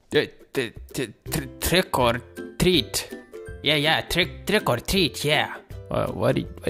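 No technical faults are audible.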